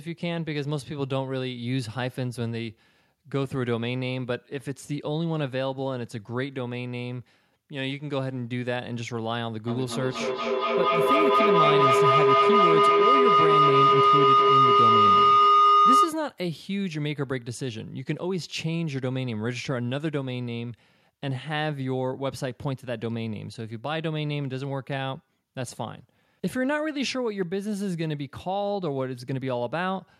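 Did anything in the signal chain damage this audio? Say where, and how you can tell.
Yes. Feedback howl, 9.67 to 16.31 s: a two-device acoustic loop builds a tone near 1.5 kHz, pulsing about five times a second and reaching about 9 dB above the speech. Unlike echo, it grows instead of fading.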